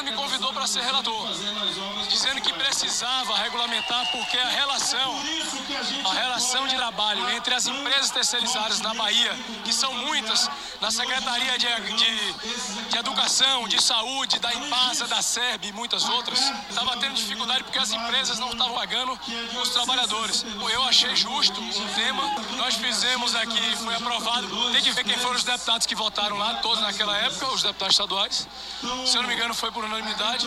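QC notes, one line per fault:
1.02 s, 6.76 s, 17.44–17.46 s, 18.74 s, 20.32 s, 24.96 s: compressed frames skipped. Whole 23.2 ms frames go missing. The audio jumps ahead by one to four frames each time, roughly 20 to 100 ms.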